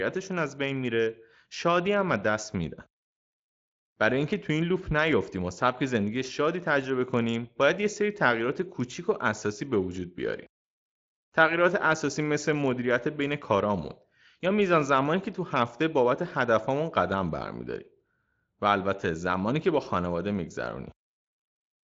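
Speech, and nothing is technically wrong with it.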